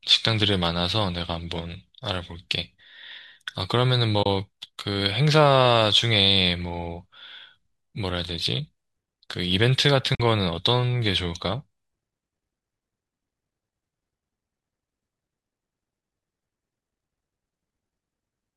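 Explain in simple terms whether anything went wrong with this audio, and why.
Two short dropouts in the speech, at 4.23 to 4.26 s and 10.15 to 10.20 s. That's AAC frame loss with muting: chunks of the stream, likely from low-delay AAC, never arrived, so the decoder filled them with silence. The gaps fade softly in and out.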